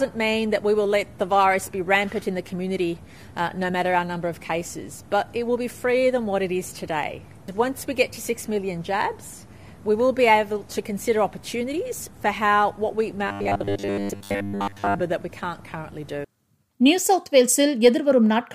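From 13.28 to 15.03 s the sound turns rigid and metallic, locked to a steady buzz near 100 Hz: robotic sound from repeated short buffers. The likely cause is audio arriving too seldom, so a 10 ms slice is replayed to fill most of that stretch.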